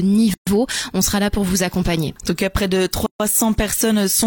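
A gap at a join of encoded pieces opens from 0.34 to 0.47 s, a gap of 130 ms, and again from 3.06 to 3.20 s, lasting 136 ms. Separately encoded segments were spliced without trimming, so each run's leading encoder delay and padded final frame remain as dead air. The continuous sound drops out abruptly, with edges blurred by the codec, then resumes exactly where it stopped.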